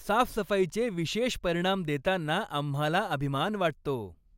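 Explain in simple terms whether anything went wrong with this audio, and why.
Nothing went wrong with this speech recording that a listener can pick out. At no point does the sound break or change in a way that would point to a technical problem.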